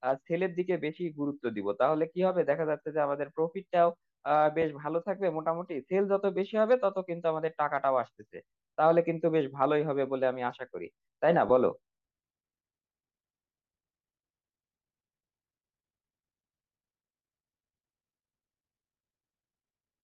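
At 4.62 s and 11.49 s, lost LE Audio frames cause 10 ms dropouts. The decoder patches each with recycled spectrum, heard as a brief grainy smear.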